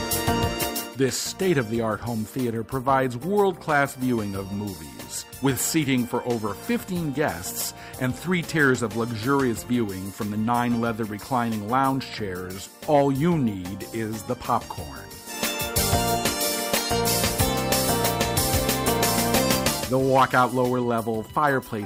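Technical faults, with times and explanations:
Nothing technical stands out here, so there's nothing to flag for this one.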